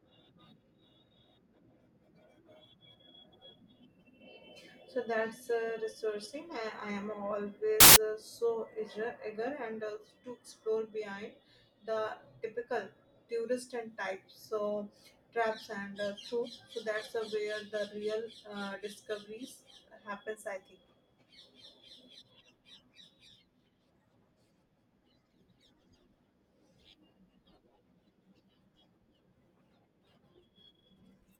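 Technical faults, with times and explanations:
7.80 to 7.96 s, samples built from the wrong bytes: a loud burst of harsh broadband noise just before "uh so", as misassembled bytes turn each sample's fast-changing low bits into its largest part.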